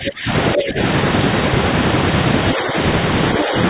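A speech clip whose level drops in four places: from 0.00 to 0.29 s by around 20 dB, from 0.54 to 0.78 s by around 10 dB, and briefly and shallowly at 2.54 to 2.76 s and 3.39 to 3.54 s. This is likely speech suppressed in double talk, where an echo canceller cannot separate the near talker from loudspeaker echo and attenuates both. Between 0.47 and 0.62 s a second voice sits just below the main one, probably the other side's voice leaking through because residual loudspeaker echo was not fully cancelled. The narrow band, with nothing above 4 kHz, is consistent with a G.711 call path.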